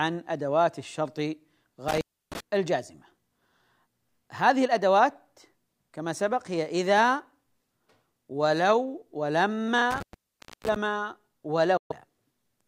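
At 1.88 to 2.40 s and again at 9.91 to 10.76 s, intermittent contact cuts the speech: a loose cable or plug opens for about 0.31 s and then 0.63 s, with crackle at each edge. On a waveform these show as flat gaps bounded by sharp spikes, with a faint hiss floor in the spectrogram.

At 11.77 s the speech drops out for about 128 ms and resumes as if it had played on, which fits a few lost audio packets, likely a Bluetooth dropout. The waveform shows a clean silent hole with no noise floor.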